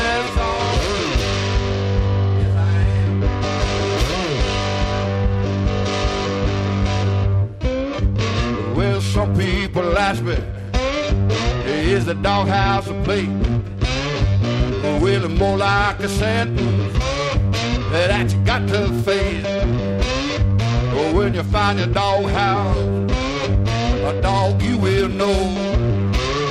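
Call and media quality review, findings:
Periodic clock jitter, whole clip. Rough, metallic edge on all sound, gone in silent gaps. Probable component: converter clock, disturbed by interference at around 1 kHz, placing sidebands at about that spacing around each component, strongest on high content. Unlike clipping, the roughness doesn't follow loudness.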